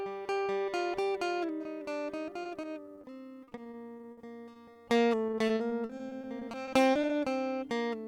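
Music, with three bursts of repeated packet loss (robotic sound), heard as choppy stretches where lost packets are patched by extending the last sound. These run at 2.43–3.05 s, 3.43–4.77 s and 5.27–7.11 s, with roughly a fifth of each stretch concealed and the longest gap 60 ms.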